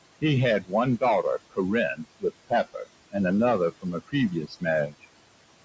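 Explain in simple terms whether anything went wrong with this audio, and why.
Noise suppressor artifacts run through the whole clip. A filter tries to remove the steady room noise by turning it down. Between words the noise sinks away. Under the speech it comes back.

Speech cut by the noise suppressor happens five times: 0.62–0.73 s, 1.95–2.24 s, 2.49–2.88 s (just before "and another from a"), 4.42–4.63 s (just after it), and 4.88–5.05 s. Each time the filter mistook quiet speech for noise. Soft sounds there come out swallowed or faint.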